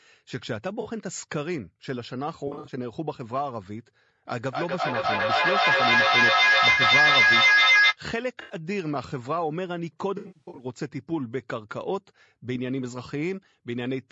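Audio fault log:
throughout: low-delay AAC compression, likely AAC-ELD at a rate around 32 kbps. The speech is rough and grainy, with noise filling the gaps between harmonics, because too few bits are left to code the detail there. Unlike a dropout, this damage is steady rather than patchy.
0.81–0.87 s, 2.47–2.72 s, 6.71–6.81 s, 8.41–8.55 s, 10.17–10.65 s: AAC frame loss with concealment. Each is a brief smeared, noisy, phasey patch where the decoder rebuilt missing frames from the last good spectrum. The longest run is only about 70 ms, so none decays into silence.
4.39–7.98 s: feedback echo between two devices. The speech comes round again about every 300 ms, thinner and more ringing each pass. At its peak it is about 10 dB above the speech, so the repeats pile up instead of dying away, unlike a single room reflection.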